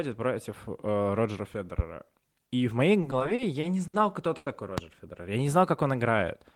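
At 1.79 to 1.82 s a single sharp loud pop jumps out, some 15 dB above the speech, which carries on beneath it. A sudden voltage step, likely from a switch, plug, static discharge or driver glitch, was added to the signal.

From 3.01 to 3.95 s the speech drags and stutters through seven repeated stalls. Packets arrived late, so the jitter buffer kept running dry and the receiver held the last sound to fill 160 ms in all, about 17% of that span. The longest hold was 60 ms, and nothing is lost.

At 4.37 to 4.48 s a short stall from a late packet holds one sound too long, with a faint buzz or dip. The delay jumped by 90 ms, and the receiver stretched the last sound for 90 ms until the packet arrived, then carried on where it left off.

At 4.78 to 4.81 s a second loud pop lands, about 20 dB above the speech. A voltage transient, likely from the same kind of electrical source, struck the signal.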